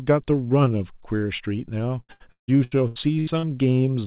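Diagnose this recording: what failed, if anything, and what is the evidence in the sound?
The failure is at the network stage: repeated packet loss (robotic sound) from 2.0 to 3.46 s. Seven gaps, the longest 159 ms, were patched by stretching the last sound. This concealed about 40% of that stretch, making speech choppy. A spectrogram shows smeared, repeated frames over a band ending at 4 kHz, which fits a narrowband G.711 call path.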